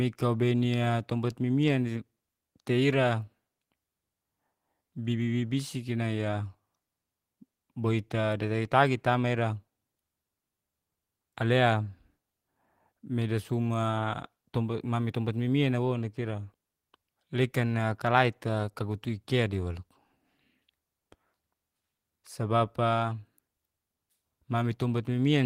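No technical faults can be heard anywhere in the recording.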